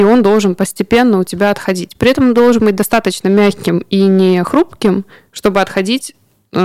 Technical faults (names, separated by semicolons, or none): hard clipping